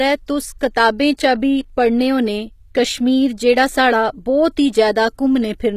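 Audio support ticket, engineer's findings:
Speech, whole clip: likely HE-AAC compression at a very low rate, around 20 kbps judging by the damage. Treble rebuilt by band replication from lower bands, not the original. Gritty, lispy s sounds, misaligned high harmonics. Nothing above about 14.9 kHz.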